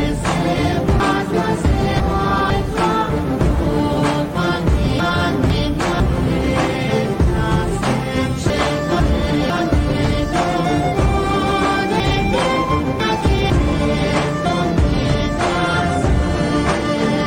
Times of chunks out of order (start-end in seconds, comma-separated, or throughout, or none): 1.00-2.50, 5.00-6.00, 8.50-9.50, 12.00-13.50